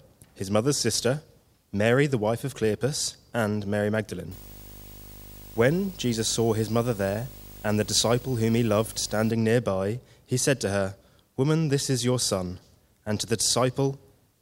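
From 4.31 to 9.31 s, video or display buzz from a coupled screen or cable adds a 50 Hz field-rate buzz and a 15.6 kHz line tone, roughly 20 dB down, drawn on a spectrogram as low harmonic stripes plus one thin high line.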